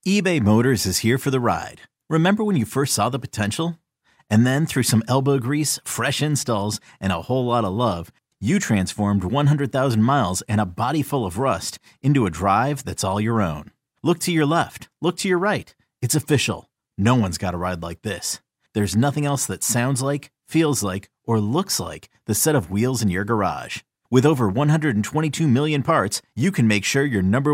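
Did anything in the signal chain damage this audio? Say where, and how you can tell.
No, nothing in the chain audibly damaged this speech recording at any stage.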